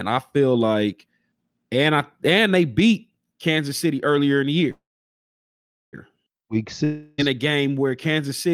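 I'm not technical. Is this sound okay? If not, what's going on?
No. Call audio freeze, 4.71 to 5.95 s, after "earlier in the": the sound stalls, likely from delayed packets, a brief fading buzz then about 1.1 s of silence, resuming with nothing lost.

Long network dropout, 6.84 to 7.20 s, just before "a game where": about 0.34 s of audio never arrived, likely a connection drop, replaced by a fading buzz, and that stretch is lost.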